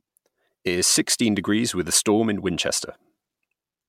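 No technical faults are audible.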